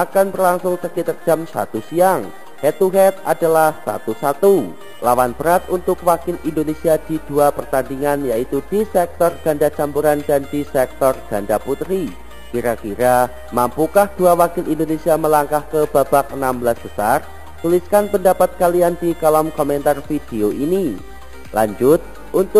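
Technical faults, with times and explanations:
Throughout, imaging from sample-and-hold upsampling: each sample was held without smoothing, so mirrored spectra about 20 dB down add a bright metallic fizz between 5.5 and 11 kHz, which fits an 11 kHz original rate.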